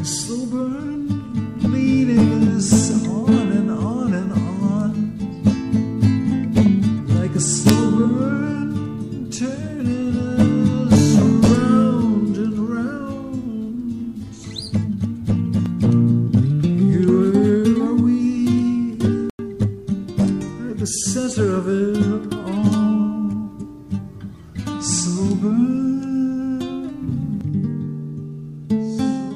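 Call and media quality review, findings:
Sharp error transient near full scale, peaking about -2 dBFS, at 7.69 s. Corrupt FLAC frame: flipped bits went undetected by the decoder, so prediction ran on bad values from the damaged bit on. Points to two frames affected.

Abrupt dropout, 19.30–19.39 s, roughly 93 ms of silence, timing preserved. Corrupt frame muted: decoder rejected a damaged compressed frame and the player substituted silence. Gap length fits a single frame.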